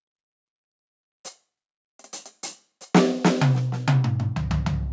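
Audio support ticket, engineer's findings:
Nothing stood out on listening to this music clip, which has been through call microphone processing that cuts everything above 8 kHz.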